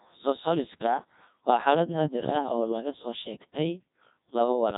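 Speech passed through the Codec 2 vocoder at 1.2 kbit/s sounds robotic and buzzy throughout. A spectrogram shows synthetic harmonic lines and nothing above 3.8 kHz.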